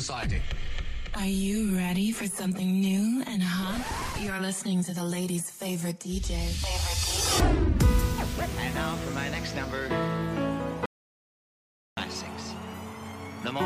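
An audio dropout to silence runs from 10.86 s to 11.97 s, cutting the sound off abruptly and bringing it back just as suddenly about 1.1 s later. The gap is dead digital silence, with no room tone or background hiss underneath, so whatever was playing during that stretch is simply missing. The likely cause is a brief loss of the input signal, such as a dropped connection or momentary mute, while recording continued writing silence.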